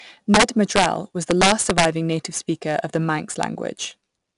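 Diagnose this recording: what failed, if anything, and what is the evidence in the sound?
Codec stage: 4-bit ADPCM compression. A gritty hiss rides on every loud stretch of speech and follows its level, and nothing sounds above 10.6 kHz, which fits a sample rate near 22 kHz at about 89 kbps. The adaptive step quantiser's error is plainly audible.

Sample-format conversion or gain stage: integer overflow. Violent cracks, sharper than clipping, occur at 0.34 to 0.86 s with peaks driven about 5 dB over full scale, at 1.31 to 1.85 s with peaks about 6 dB over, and once at 3.43 s right at the limit. The values wrapped to the opposite sign instead of saturating.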